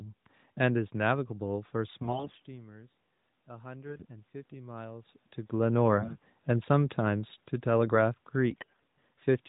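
At 2.02 to 2.46 s the speech turns hoarse and gargly while keeping roughly its pitch and loudness. These are AMR bit errors: on a weak link the less-protected bits of each frame arrived corrupted, at a rate of around 15 percent, but the checksum on the core bits still passed. The decoder therefore placed its excitation pulses wrongly and used skewed pitch, gain and spectral values.

From 3.48 to 5.19 s the automatic gain rises. After the input level fell by about 18 dB, the gain control judged the signal too quiet and slowly raised its gain by about 4 dB. Speech and room noise swell together over well over a second, rather than jumping at once.

The same AMR bit-error scratchiness returns at 3.86 to 4.05 s, inside that gain ramp, then at 5.98 to 6.19 s and 8.50 to 8.84 s, each a short burst of rough, scratchy speech.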